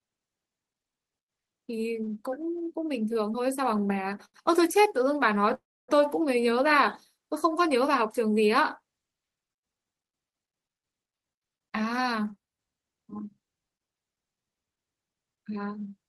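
Short stalls from late packets occur at 3.13–3.18 s and 4.25–4.37 s in this speech recording: the receiver's jitter buffer ran dry and the last sound was held for about 17 ms and then 88 ms before the audio resumed where it left off, so nothing is lost but each spot is stretched. A call audio freeze follows at 5.54–5.91 s, where the sound continues as a fading fill and then drops to near silence for about 280 ms, adding roughly 345 ms of gap. The likely cause is packets held up in transit until the buffer emptied, after which playback picks up from the same point. A jitter buffer speed-up runs from 11.45 to 13.97 s, with the audio playing at about 112 % speed while the pitch stays the same. The receiver trimmed short pitch-period pieces over and over to shed a backlog of around 0.3 s, which makes that stretch sound hurried.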